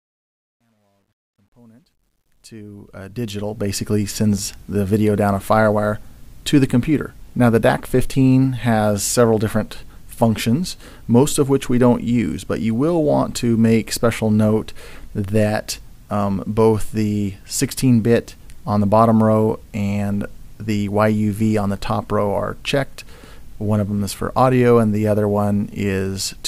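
Right at the start, from 0.0 to 3.88 s, the fade-in has truncation distortion. The gain stage is rounding the quiet samples to coarse levels with no dither, which fits something keeping only 11 bits. The waveform collapses into a few square steps, so the opening sounds gritty. It's roughest from 0.0 to 2.46 s, then cleans up as the fade reaches full level around 3.88 s.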